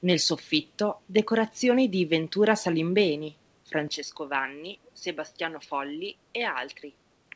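Speech runs through a call path whose band reaches 8 kHz at first. At 3.88 s the sound turns duller and boxy, and it stays that way to the end. The level drops by about 5 dB. A faint new noise floor appears, far below the speech. There is no gap at the change. This points to an input switched to a poorer device, likely a different microphone or a headset's call profile with its narrower band. From 4.84 to 4.88 s a short, very faint scrap of echo leak is heard. It is a delayed copy of the speech, arriving 235 ms after the original and sitting well below it. The echo canceller on the side playing the call aloud likely let a piece of its loudspeaker playback through its microphone. That leftover was sent back into the call.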